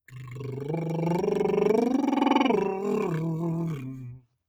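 Right from the start of this music you can hear a speech-style noise suppressor left running across the whole clip. It treats sustained, steady parts of the mix as background noise and keeps pulling them down, so the level swings by around 5 dB as it reacts. Attacks come through fine, but the held parts and tails keep dipping, which gives a pumping, thinned-out feel from start to finish.

On top of that there are two spots where the sound is cut by the noise suppressor much harder than elsewhere. The first runs from 0.08 to 0.43 s, dropping by up to about 11 dB. The second is worse: from 3.76 to 4.43 s, close to the end, it bites by up to about 20 dB.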